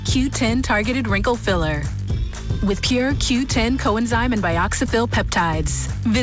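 No technical faults can be heard. The sound arrives over a call path with a wideband codec that leaves nothing above 8 kHz, which fits G.722 at 64 kbps.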